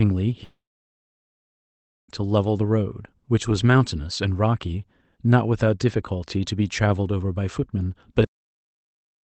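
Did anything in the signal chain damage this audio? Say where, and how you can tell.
Yes. From about 0.43 s to 2.10 s the sound turns into a short fading buzz, then roughly a second and a half of near-silence, and resumes with a piece missing. That's likely a long network dropout: packets stopped arriving, concealment smeared the last sound out, then gave up.

At 8.24 s there's a cut-off end. The audio stops mid-sound and drops straight to digital silence with no decay, and stays dead to the finish. That's the buffer or playback stage never writing out its final buffers.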